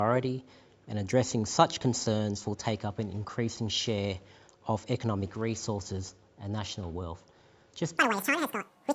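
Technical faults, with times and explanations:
7.98–8.95 s, wrong sample rate: samples are clocked out at double speed without conversion, which fits 16 kHz material played at 32 kHz, so the sound runs twice as fast and 12 semitones higher.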